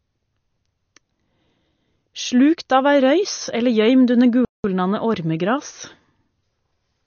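From start to finish the speech carries plainly audible damage, most likely from MP3 compression. Nothing gets through above about 6.6 kHz, so the top end sounds dull, and the rest has that watery or swirly quality you get when the encoder runs short of bits and starts dropping weaker frequency lines, which then flicker in and out from frame to frame. The amount of damage fits a low bitrate, somewhere near 33 kbps.

At 4.45 s the audio simply cuts out and stays silent until 4.64 s, a gap of about 190 ms, before the speech picks up again. That's a playback stall: the player ran out of data, or its thread got held up, and nothing was sent to the output until it recovered. It's most likely the player side rather than the recording, since the sound stops mid-flow instead of fading.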